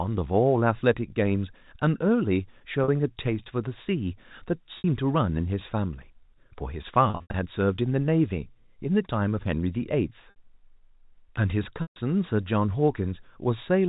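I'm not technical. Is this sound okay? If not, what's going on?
No. Packet loss with pitch repetition at 2.84 s (40 ms), 4.78 s (60 ms), 7.1–7.34 s (180 ms, in scattered pieces), 10.3 s (60 ms) and 11.82–11.96 s (140 ms). Pieces of the speech went missing in transit, and the receiver covered each gap by repeating the last fragment of sound. The short moments sound briefly stretched or buzzy; the longer ones fade into silence before the speech returns.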